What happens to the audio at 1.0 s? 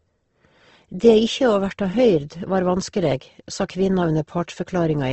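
At 1.0 s, as throughout, the speech sounds grainy and rough, with nothing above 8.2 kHz. Likely Opus compression, filling starved bands with noise.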